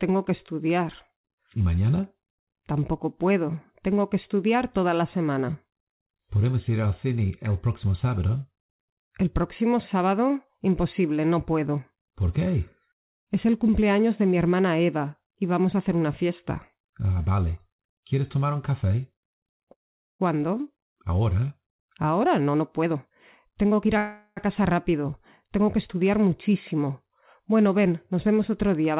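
Call audio freezes at 19.72 to 20.21 s and 23.97 to 24.39 s break this narrowband call audio, whose content stops at 4 kHz as G.711 mu-law coding would leave it. The likely cause is packets stalling until the jitter buffer ran dry. In the first freeze a brief continuation of the last sound drops into about 440 ms of silence. In the second, roughly 390 ms of fading buzz or hiss fills the gap. Each time the audio resumes where it left off, so nothing is lost, only delayed. A jitter buffer speed-up runs from 21.78 to 23.96 s. The receiver clipped out short pitch-period slices over and over to shed around 0.4 s of backlog, so the sound plays at about 117 percent speed with unchanged pitch and comes across as hurried.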